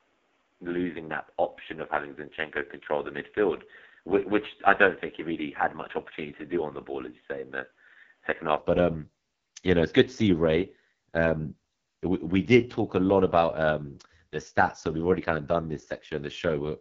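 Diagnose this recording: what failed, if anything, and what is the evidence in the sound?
The whole clip went through the AMR wideband (HD Voice) codec, and hard. Speech sounds rough and raspy throughout, with nothing above 7.5 kHz. That's the heavy damage of the codec's bottom modes, which fits the 6.6 kbit/s rate, where the vocal tract model runs very short of bits.

From 0.0 to 8.59 s the band stops at 3.8 kHz, giving a dull, boxy sound with a faint extra noise floor well below the speech. Then it opens up with no gap or level jump. Most likely the input switched to a poorer device, such as a headset call profile, and back.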